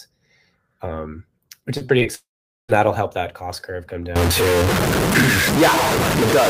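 Speech that turns choppy and robotic from 1.77 to 2.07 s, where four short holes, the longest 34 ms, are patched by repeating sound: repeated packet loss, with about a third of that stretch concealed. From 2.15 to 2.71 s the sound smears into a fading buzz, then about 0.44 s of silence, and returns with that portion gone, likely a long network dropout. From 4.16 s to the end, distortion sits on the speech and fills the pauses with noise, likely a stuck bit in the data path.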